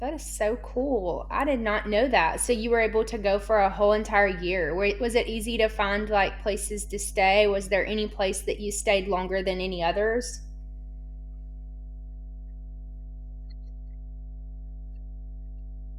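Mains hum runs from start to finish, a steady 50 Hz drone sitting under the speech at a fairly prominent level, roughly 15 dB below it. The power line is leaking into the signal path, most plausibly through a ground loop between connected equipment or magnetic coupling from a nearby transformer. It sounds like a constant low buzz with some low harmonics, and it stays clearly audible through the pauses between phrases.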